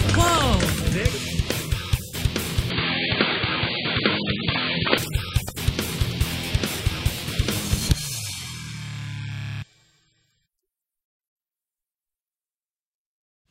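From 2.70 s to 4.98 s the sound goes dull, with nothing above 4.7 kHz, then clears again: likely an input switched to a poorer device. A spectrogram shows the top band cut flat. The waveform holds its level with no gaps, over a new, very low noise floor.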